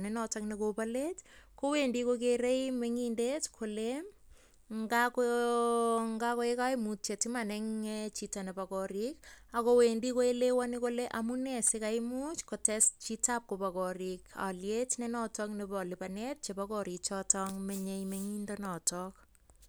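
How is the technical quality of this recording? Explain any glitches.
The technical quality of this recording is sound, with no glitches to explain.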